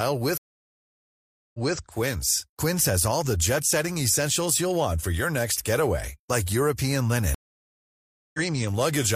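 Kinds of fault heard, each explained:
stream reconnect: speech twice goes silent for about a second, resuming 0.23 s earlier, then roughly 0.3 s later, because the connection dropped and decoding restarted mid-stream.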